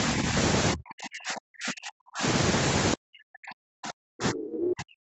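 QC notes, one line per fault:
0.14–0.35 s, 0.73–2.23 s and 2.94 s to the end, speech suppressed in double talk: the first stretch is just a shallow dip of around 5 dB, but the later two get pushed down as much as 40 dB, so the talker chops out in pieces. It's likely an echo canceller that couldn't separate this talker from the far end's loudspeaker echo and turned everything down while the other side was speaking.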